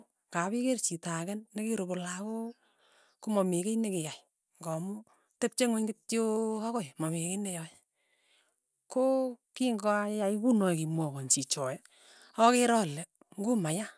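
No technical faults are audible anywhere in the speech recording.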